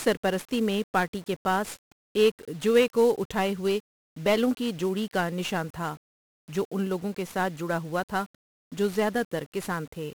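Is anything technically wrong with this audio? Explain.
Yes. From start to finish the speech is fuzzy and crackly, with a dense broadband hiss over everything and the upper frequencies buried in it. The damage is heavy. It points to 1-bit DFPWM compression, consistent with a rate around 48 kbps. DFPWM keeps only one bit per sample, and each bit nudges an adaptive charge up or down to follow the waveform. With so little resolution, the tracking error becomes strong noise across the whole spectrum.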